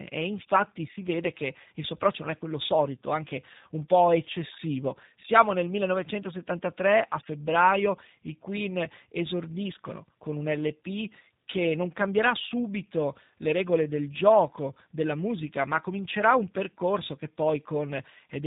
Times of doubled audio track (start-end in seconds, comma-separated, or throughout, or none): none